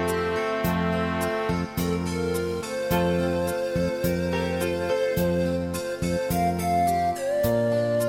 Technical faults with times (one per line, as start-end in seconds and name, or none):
0.00-8.09 mains buzz